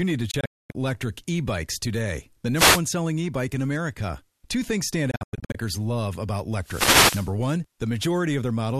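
From 0.31 to 0.75 s, right after "need to", a digital broadcast dropout mutes the speech in scattered holes, the longest 240 ms, as the receiver discards failed frames and fades out over about 3 ms. At 2.55 to 2.81 s, after "today the", a wireless microphone noise hit occurs: the FM radio link fades and receiver noise surges into a brief burst of static. A second dropout from 5.11 to 5.55 s, between "things stand" and "love about", leaves short gaps of up to 96 ms. Another noise hit, longer, runs from 6.61 to 7.34 s.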